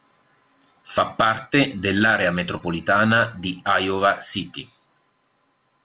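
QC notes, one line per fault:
2.57–2.63 s: short concealed packet loss. About 30 ms of speech reached the decoder too late. The receiver filled the gap by extending the preceding sound, then blended back into the real audio. This leaves a brief smear or wobble.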